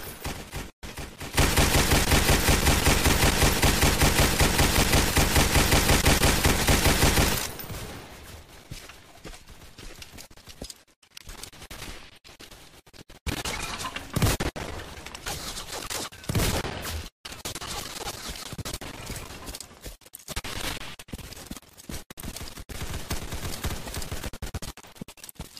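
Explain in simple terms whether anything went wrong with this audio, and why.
Damaged data in a compressed stream causes brief glitches at 2.03 to 2.05 s, 14.34 to 14.36 s and 18.22 s. Bits of the stored file were corrupted, so the player misread those moments, lost its place and searched for the next readable chunk, leaving a quick chirp, squawk, click or short gap.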